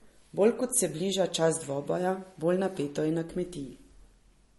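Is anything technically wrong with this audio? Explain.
Yes. Throughout the speech there is plainly audible damage of the kind that low-bitrate MP3 compression likely causes. Starved of bits, the encoder discards the treble, leaving nothing above about 11.6 kHz, and drops quieter frequency lines that then flicker in and out between frames. The result sounds watery and swirly, with smeared consonant onsets, which fits a bitrate near 40 kbps. A spectrogram shows a hard ceiling at 11.6 kHz and patchy, blocky holes below it.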